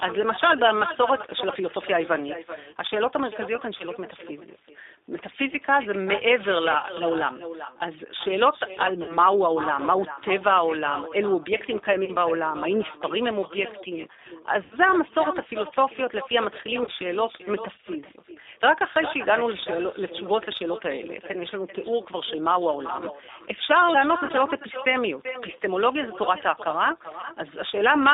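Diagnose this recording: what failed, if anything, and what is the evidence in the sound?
Call processing failed: no echo canceller at the far end, so speech returns roughly 0.4 s later as a thin copy about 13 dB quieter throughout.

At the codec stage, G.729 coding confines sound to 300 Hz to 3.7 kHz and gives it a rough, synthetic edge, fitting an 8 kbit/s stream.

On the network, packets were lost and the speech codec concealed them, producing fading smears at 3.78, 6.78, 9.03, 12.05, 14.63, 16.83, 24.25 and 27.21 s.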